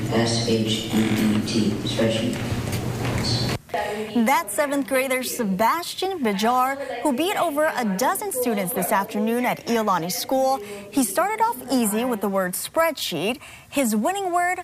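Nothing goes wrong anywhere along the way here, so there's no fault to report at any point in the audio.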